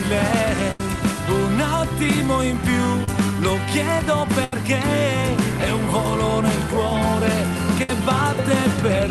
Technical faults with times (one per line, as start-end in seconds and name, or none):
0.71-0.80 burst of packet loss
3.04-3.08 short concealed packet loss
4.44-4.53 burst of packet loss
7.83-7.90 burst of packet loss